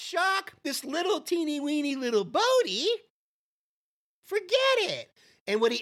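Nothing in this speech recording stood out as a technical problem on listening.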